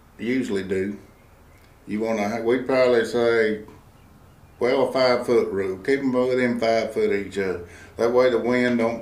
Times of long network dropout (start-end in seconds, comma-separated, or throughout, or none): none